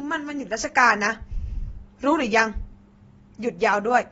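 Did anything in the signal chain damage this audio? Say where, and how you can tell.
Yes. The damage sits at the codec stage and runs through the whole speech clip: the sound is plainly dull and smeared, with a warbling, fizzy edge on sibilants, the signature of AAC compression, likely AAC-LC at a low rate that fits about 24 kbps. Starved of bits, the encoder dropped its bandwidth, so a spectrogram shows a hard ceiling with nothing above 7.7 kHz, and the quantised bands below appear blotchy and patchy rather than smoothly continuous.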